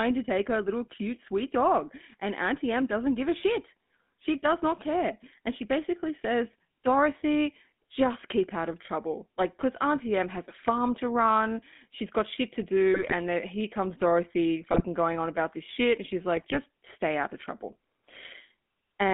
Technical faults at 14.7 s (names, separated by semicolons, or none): GSM full-rate codec; GSM bit errors